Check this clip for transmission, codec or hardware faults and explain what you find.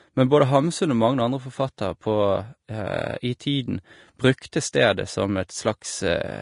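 Two faults are present: codec compression damage across the whole speech recording, and one brief pre-echo.

Vorbis compression runs throughout. Nothing exists above 10.6 kHz, and the treble sounds hissy and grainy, likely from Vorbis at a low bitrate, roughly 36 kbps. Coarse quantisation turns fine detail into noise. A spectrogram shows a flat ceiling at 10.6 kHz with speckled upper bands.

Pre-echo occurs at 4.52 s. A short hiss, spread over about 10 ms, arrives just before a sharp onset. The codec spread quantisation noise for the loud attack across its whole block. On the waveform, low fuzz precedes the transient, and the spectrogram shows a faint vertical smear.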